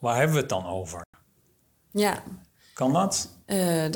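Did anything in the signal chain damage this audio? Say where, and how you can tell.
Yes, a digital broadcast dropout at the receiver. The speech mutes from 1.04 to 1.15 s with a 3 ms fade. About 96 ms is lost, which fits three failed frames.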